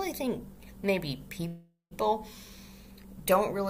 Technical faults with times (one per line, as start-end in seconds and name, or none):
1.47-1.93 call audio freeze